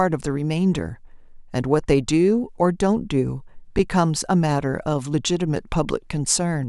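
At 3.79 s the speech briefly freezes. This is an underrun with held sample. The output buffer ran dry, and the converter kept putting out its last value until fresh data arrived. The waveform sits flat for about 5.3 ms, which is 256 samples. The sound stops with almost no click. No audio was dropped, so playback picks up where it paused, and the restart is soft. It registers as a tiny hitch.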